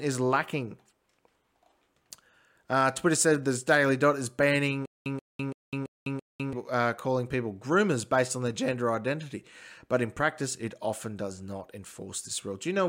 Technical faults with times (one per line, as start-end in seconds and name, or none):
4.86-6.53 stutter with silent gaps